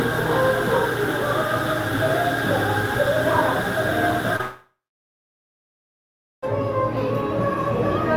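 Short concealed packet loss at 4.36 to 4.41 s: roughly 20 ms of this everyday-sound recording never arrived, so the receiver extended the previous sound to bridge the gap, leaving a brief smear. A long network dropout follows from 4.41 to 6.44 s, likely caused by the stream stopping. The last sound carries on briefly, fades, and leaves about 1.7 s of silence before the audio returns with that stretch missing.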